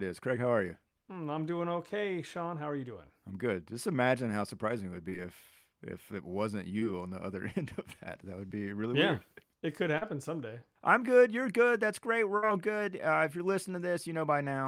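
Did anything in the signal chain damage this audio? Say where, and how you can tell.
Yes. Short concealed packet loss on the network path at 5.09–5.13 s (after "how surprising it would"), 6.79–6.83 s (before "on the other"), 8.47–8.52 s (before "be really yeah weird") and 9.98–10.03 s. Each is a brief smear where the receiver stretched the preceding sound over 20–40 ms that never arrived.

A burst of packet loss, also on the network path, occurs at 12.37–12.44 s. About 60 ms went missing in a row, so the decoder extended the last sound and let it fade before real audio resumed. That leaves an audible held, dying tail and a skipped chunk.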